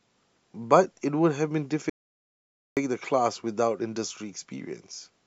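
An audio dropout to silence runs from 1.90 to 2.77 s, cutting the speech off mid-flow for about 0.87 s of dead silence with no room tone. The input was likely lost, through a disconnected device, failed link or mute, while silence kept being written.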